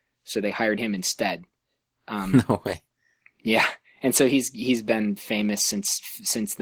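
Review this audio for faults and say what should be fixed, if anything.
The whole clip carries Opus voice compression damage, plainly audible from start to finish. The speech sounds hoarse and faintly robotic, with coarse, grainy texture, which fits the hybrid mode: linear prediction codes the band up to 8 kHz and a transform layer thinly codes the content above. The sound is consistent with a bitrate around 16 kbps. Unlike a simple low-pass filter, the top end is still present but rough and smeared rather than removed. Re-encoding at a higher bitrate, or keeping an uncompressed source, would prevent it.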